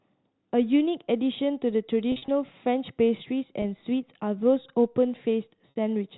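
At 2.12 to 2.28 s, packet loss with pitch repetition hits the speech. About 100 ms goes missing across 160 ms, in runs no longer than 40 ms. The receiver fills each hole by repeating the last pitch period, so the sound briefly holds and turns buzzy. At 3.62 to 3.64 s, a 20 ms gap gives one short held blip. At 5.70 to 5.76 s, a 60 ms loss, which fits three 20 ms packets, produces a longer, fading buzz. This all happens over narrowband G.711 telephone coding.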